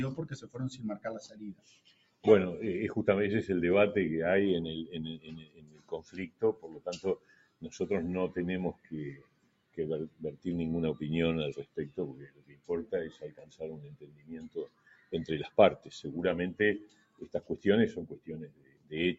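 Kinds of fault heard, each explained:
Noise suppressor applied to music or sounds: a speech-tuned suppressor stays on throughout and treats steady tones and decaying tails as noise, so level pumps by about 20 dB rather than dropping out.
Sound cut by the noise suppressor: particular stretches, such as 5.17 to 7.65 s and 11.65 to 15.89 s, sink by about 16 dB. Held sound fades while sudden onsets still come through.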